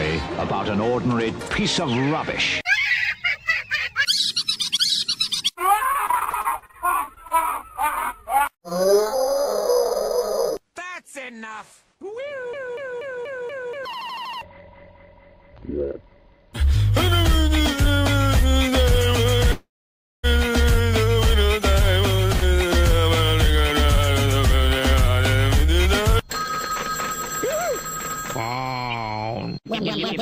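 Repeated packet loss (robotic sound) runs from 5.83 to 7.32 s. Packets kept going missing, and each hole, up to 33 ms long, was bridged by extending the preceding sound. About 22% of the stretch is patched and roughly 240 ms is lost outright, so the audio turns choppy.

Scattered short gaps follow between 8.38 and 9.19 s. A few isolated packets failed to arrive, and each was covered by stretching the last sound over holes of up to about 30 ms. The result is brief ticks and smears over otherwise continuous audio, with only about 20 ms actually lost.

A jitter buffer speed-up occurs from 11.95 to 12.33 s. The receiver had banked too much audio, so it trimmed short pitch-period slices repeatedly, removing roughly 40 ms. Playback runs at 107% speed without any pitch change, giving a brief hurried quality.

Call audio freeze appears from 19.52 to 20.25 s. The sound stalls as the last moment is drawn out and then drops to silence for 570 ms before resuming exactly where it left off, with nothing missing. 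The likely cause is delayed packets draining the jitter buffer.

A second jitter buffer speed-up stretches from 22.67 to 29.59 s. Here the receiver shed roughly 300 ms of backlog by repeatedly cutting pitch-period slices, so the audio plays at 104% speed at unchanged pitch.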